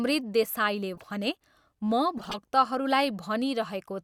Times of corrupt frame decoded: 0.95-1.06, 2.17-2.36

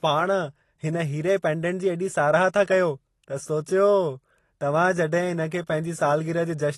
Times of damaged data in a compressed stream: none

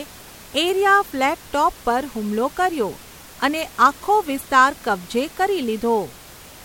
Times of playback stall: none

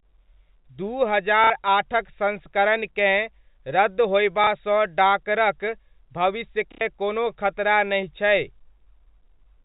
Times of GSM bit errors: none

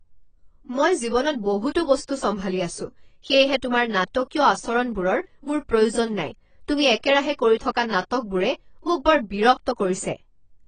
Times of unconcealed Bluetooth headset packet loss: none

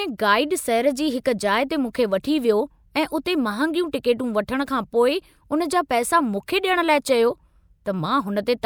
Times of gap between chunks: none

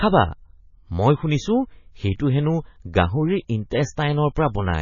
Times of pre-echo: 3.70

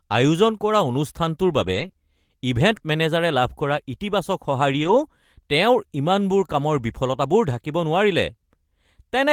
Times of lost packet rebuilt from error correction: 1.59-1.85, 4.79-5.05

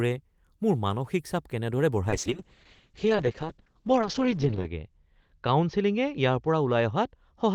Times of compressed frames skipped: none

